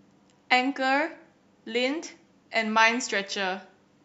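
No technical faults can be heard anywhere in this speech recording.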